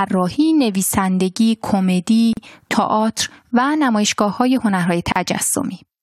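Separately encoded pieces were joined without trimming each encoder's start delay and last-frame padding, leaving a gap at a join of encoded pieces at 2.33 s (39 ms) and 5.12 s (37 ms). The speech drops to silence, with smeared edges, then resumes where it stopped.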